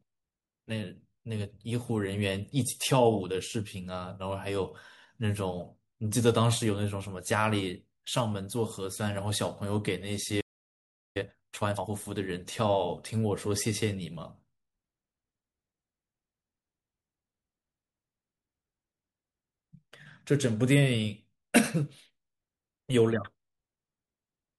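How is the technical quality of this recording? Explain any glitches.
The recording has two linked glitches, a silence followed by a hurried passage. At 10.40 s the speech cuts out for about 0.75 s until 11.17 s, a playback stall, likely the player starving for data or its thread being blocked. From 11.17 to 11.91 s, time-compressed catch-up runs the speech at twice normal speed by dropping and cross-fading short slices, so it sounds rushed at unchanged pitch.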